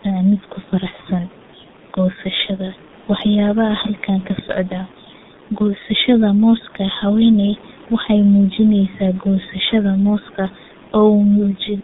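Throughout the speech, the G.723.1 codec's very low bitrate, which fits roughly 6 kbit/s, squeezes the voice into 150 Hz to 3.7 kHz and heavily damages it. Speech sounds muffled and hoarse, consonants blur, and the room noise sits about 25 dB below.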